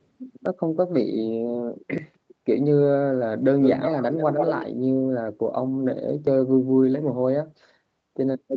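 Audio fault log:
0.46 s, 1.98 s and 6.27 s, dropped buffer (overrun): each is a jump where the sound skips forward with no gap. The loss is tiny at 0.46 s and 6.27 s and somewhat longer at 1.98 s. The likely cause is the input buffer being overwritten before it was read.
3.61 to 4.66 s, echo leak: a second copy of the speech trails the original by 120 ms, nearly as loud as the direct sound, giving a doubled, smeared quality. This is likely the far end's echo canceller letting loudspeaker pickup return down the line.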